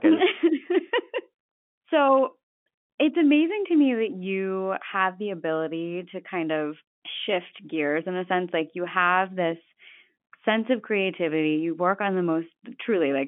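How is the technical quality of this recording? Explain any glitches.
No glitches: the speech comes over a G.711 telephone coding path at 64 kbps with the line band running from 150 Hz to 3.4 kHz, and nothing heard departs from what that channel normally does.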